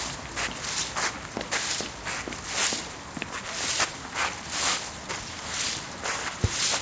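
No technical faults can be heard anywhere in it.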